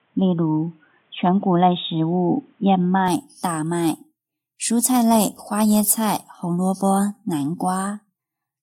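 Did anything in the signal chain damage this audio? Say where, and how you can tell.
Yes. Input switched to a poorer device, likely at the capture stage: from 0 to 3.08 s the speech stops near 3.8 kHz, sounding dull, with faint added noise and no gap.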